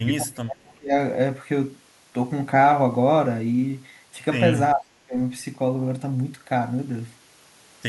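Speech that drops by roughly 30 dB from 0.05 to 0.94 s and 4.74 to 5.17 s, visible as collapsed waveform and faded spectrogram bands, likely speech suppressed in double talk.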